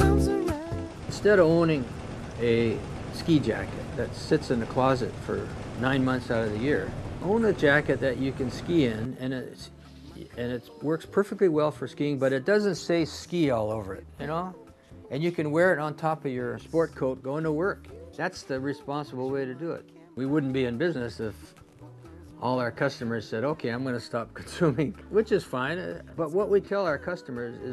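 No technical faults can be heard anywhere in the recording, and the signal holds steady throughout.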